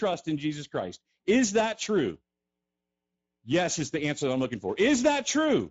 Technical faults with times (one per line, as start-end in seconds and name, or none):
0.00-5.70 Speex codec